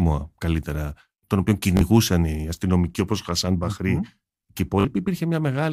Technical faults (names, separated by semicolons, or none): Bluetooth stutter